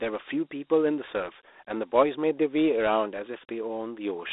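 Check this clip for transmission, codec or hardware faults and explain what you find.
One codec fault runs through the whole recording: Dialogic VOX ADPCM. The speech was squeezed into 4-bit adaptive steps, which fits a 32 kbit/s OKI coder, and confined to a phone band of 300 Hz to 3.7 kHz, with nothing above 3.8 kHz. That leaves thin, muffled speech trailed by a plainly audible gritty hiss.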